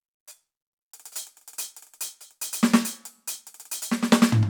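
No technical faults can be heard anywhere in the music.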